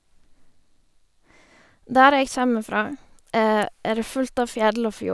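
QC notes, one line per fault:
No faults heard anywhere in this speech recording.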